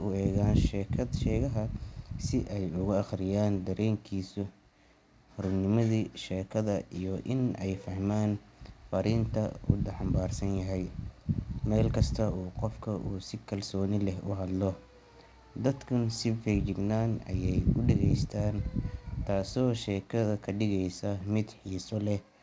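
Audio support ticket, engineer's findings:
No faults found in the speech; band-limited to 8 kHz, which fits a wideband G.722 call path at 64 kbps.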